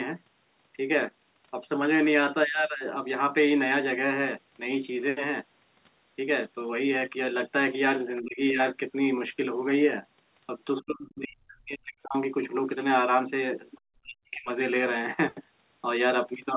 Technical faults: other side's voice leaking through; speech suppressed in double talk

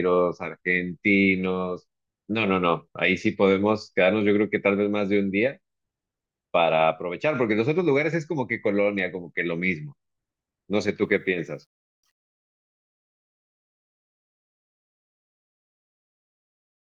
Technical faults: truncation distortion on a fade

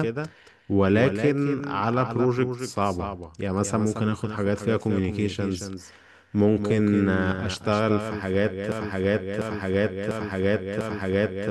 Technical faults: doubled audio track; broken-record loop

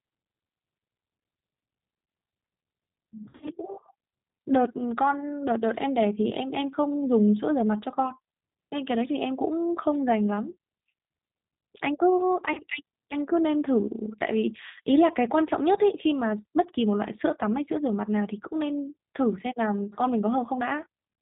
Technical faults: G.729 codec; VoIP packet loss concealed by the speech codec

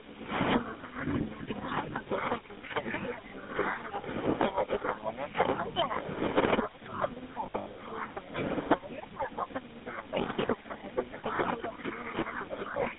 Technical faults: GSM full-rate codec; lost GSM frames

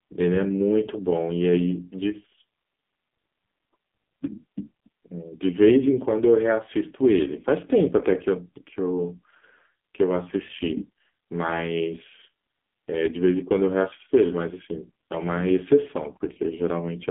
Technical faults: AMR narrowband mobile codec

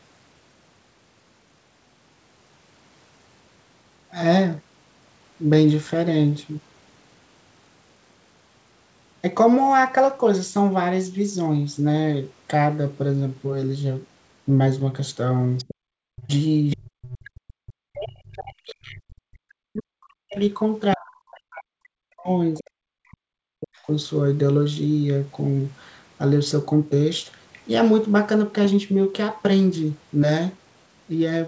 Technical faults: other side's voice leaking through; background gated by the echo canceller; speech suppressed in double talk

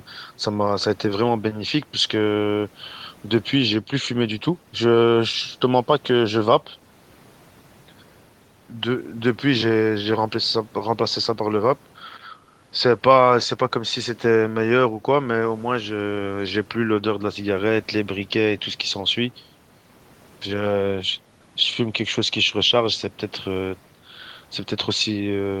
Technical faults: none

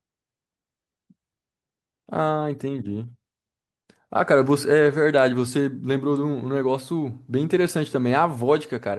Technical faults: none

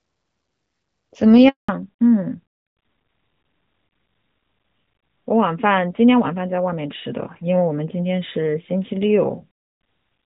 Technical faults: handover gap; fallback to narrowband

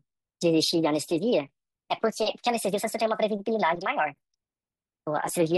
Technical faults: wrong sample rate

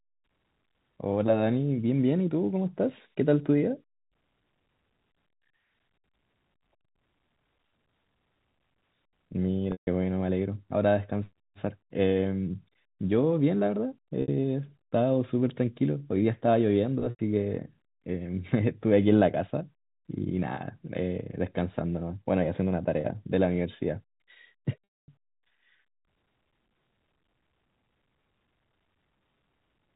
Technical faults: packet loss with pitch repetition

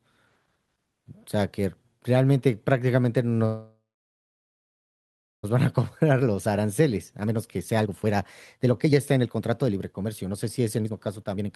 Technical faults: call audio freeze; jitter buffer speed-up

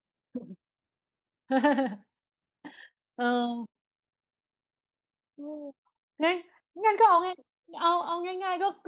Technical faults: repeated stalls (stutter); short stall from a late packet; microphone volume stepped down; jitter buffer speed-up; microphone overload

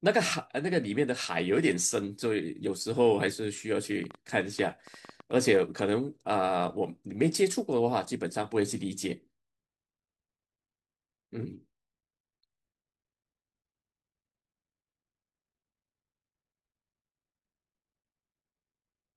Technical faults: train of clicks

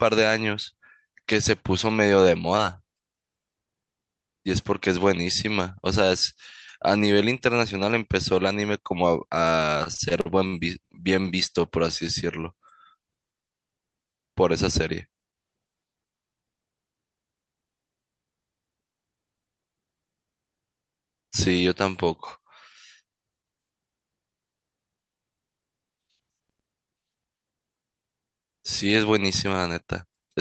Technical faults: repeated stalls (stutter)

